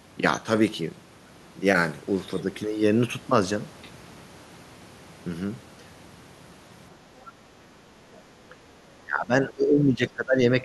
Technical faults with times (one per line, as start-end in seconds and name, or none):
8.14-8.18 other side's voice leaking through
8.49-8.55 speech suppressed in double talk
9.02-10.65 speech suppressed in double talk